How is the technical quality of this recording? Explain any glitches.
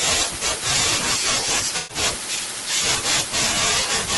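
The technical quality is compromised: the speech carries audible codec damage throughout, and there is one concealed dropout.

Throughout the clip, the speech sounds rough and grainy, with a hiss-like fill between the harmonics and a top end that sounds thinned or synthetic. This is likely low-delay AAC compression (AAC-ELD), the kind used for video calls, which fits a bitrate of around 32 kbps. Its very short frames cannot resolve pitch harmonics finely, and at this bitrate the encoder runs short of bits. It substitutes noise for detail and approximates the high band.

From about 1.77 to 1.97 s, an AAC frame loss with concealment occurs. Roughly 120 ms of coded audio, consistent with about six frames, never reached the decoder. The decoder filled the gap by extending the last good spectrum with altered phase and smoothed energy rather than real signal. The result is a smeared, noisy, slightly phasey patch where the speech loses its definition before normal decoding resumes.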